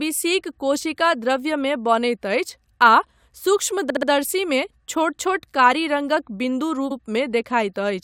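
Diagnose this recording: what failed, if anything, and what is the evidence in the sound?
The speech stutters twice, a fault of repeated frames at the codec or storage stage. From 3.89 to 4.08 s, a short slice plays three extra times, adding 192 ms. At 6.90 to 6.96 s, one slice replays once, adding 64 ms. Each repeat is 64 ms long, which fits 64 ms compressed frames. The decoder received the same compressed data more than once and played it again.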